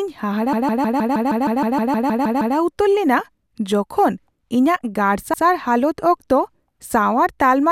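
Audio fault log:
0.53–2.56 s: repeated frames. A block of about 157 ms of speech, six compressed frames long, plays over and over, thirteen extra times, before the talker moves on into "ᱩᱛᱟᱹᱨ ᱞᱮᱱᱟ". The decoder is handed the same run of frames again and again, so the same fragment loops as a rapid machine-like stutter. The passage is stretched by about 2.04 s.
5.33–5.44 s: repeated frames. A shorter block of about 105 ms, four frames long, is played one extra time, giving a single quick hiccup. The clip grows by about 0.1 s here.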